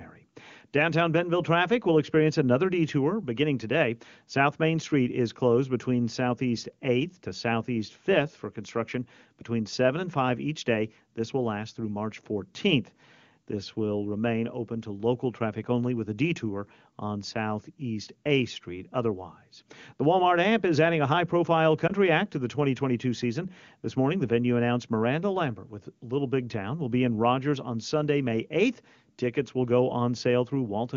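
At 21.88 to 21.92 s, between "adding a high profile" and "act to the", a lost AMR speech frame, which fits one 20 ms frame, produces a brief dip or warble. It appears as a momentary envelope notch or a smeared harmonic band.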